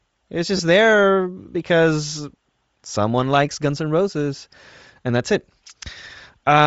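Throughout, the speech has a breathy, grainy edge and a thin top end. That points to Bluetooth LC3 compression, likely at a low rate around 32 kbps.

From 0.57 to 0.59 s, lost LE Audio frames produce a brief noisy smear. The decoder repeated the last spectrum with scrambled phase across about 22.5 ms, which fits three lost 7.5 ms frames. A single lost frame at 3.50 s causes a shorter, similar grainy blip.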